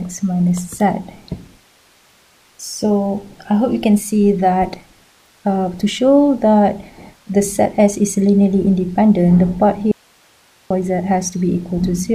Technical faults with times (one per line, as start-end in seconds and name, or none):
9.92-10.70 audio dropout to a faint residue